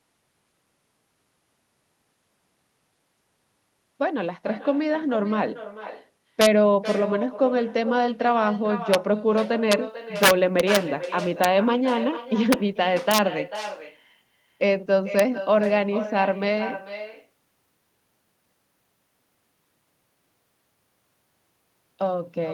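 A speech recording carrying two faults. Echo with no canceller runs throughout: every phrase returns roughly 400 ms later, about 12 dB down, as a thin copy. That fixed, distinct delay is what separates it from room reverberation, which smears continuously rather than repeating the voice. Integer overflow appears as violent cracks at 6.41–6.46 s, 8.94 s, 9.72 s, 10.23–10.76 s, 11.44 s, 12.53 s, 13.11–13.18 s and 15.19 s, where peaks exceed full scale by up to about 4 dB and wrap to the opposite sign. Clipping would only flatten these peaks, so the sharp full-range snaps mark them as overflow.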